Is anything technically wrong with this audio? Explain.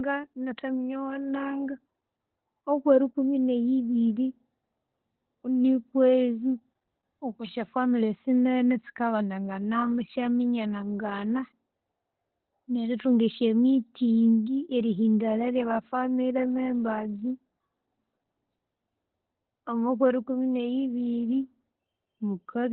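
Yes. Throughout, the speech sounds muffled, hoarse and slightly robotic, with nothing above 4.2 kHz. This is Opus voice compression: narrowband SILK coding at a very low bitrate, around 8 kbps, which coarsely quantises the excitation.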